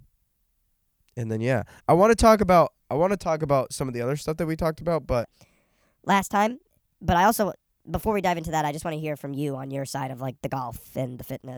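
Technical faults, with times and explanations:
5.24 to 11.57 s: section at the wrong speed. The speech runs 1.27 times fast, hurried and about four semitones higher, likely from playback against the wrong clock.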